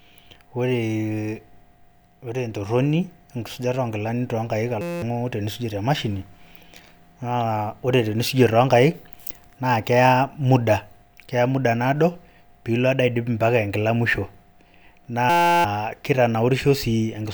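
At 4.81–5.02 s and again at 15.30–15.64 s, there's a system hang loop: the system froze and replayed one 5.8 ms chunk, fitting a 256-sample buffer, as a steady 172 Hz buzz.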